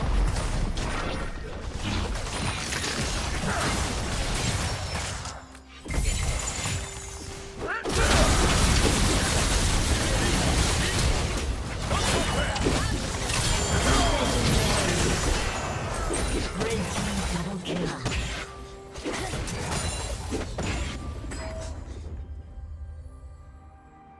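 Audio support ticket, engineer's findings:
No audible faults found: signal level, continuity and timing stay steady across the whole capture, with nothing to attribute to any component in the chain.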